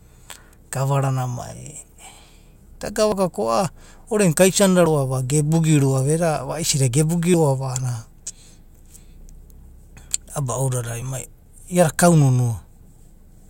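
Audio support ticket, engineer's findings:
Forward jumps in the speech at 3.12, 4.86, 7.34 and 11.02 s, each skipping roughly 20 to 40 ms with no gap. Likely dropped buffer (overrun) in capture. Waveform shows abrupt splices; spectrogram shows thin vertical broadband lines.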